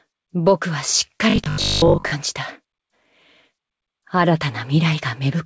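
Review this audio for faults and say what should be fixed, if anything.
From 1.30 to 2.14 s the sound collapses into a rigid, metallic 50 Hz buzz, the classic robotic sound from repeated short buffers. The receiver likely wasn't getting audio fast enough, so it kept replaying its last 20 ms chunk while skipping the real material. That's why most of that stretch sounds looped and the 50 Hz pitch stays locked. The G.722 band limit near 8 kHz is expected from the call path. To prevent it, give the jitter buffer more headroom.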